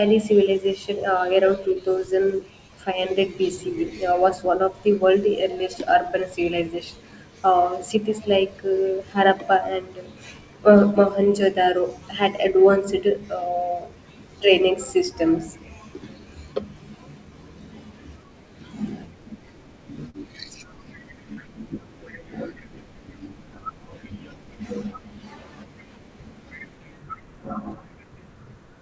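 Brief smears at 20.10 s and 21.34 s are short concealed packet loss: about 40 ms and 20 ms of audio arrived too late, so the receiver extended the preceding sound to bridge each gap, over a call path whose band ends at 8 kHz, consistent with G.722.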